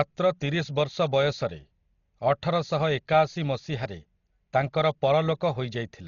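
Throughout, likely heavy Dolby Digital compression at a bitrate fitting 32 kbps strips everything above 6.9 kHz, leaving the speech dull with a rough, fluttering noise.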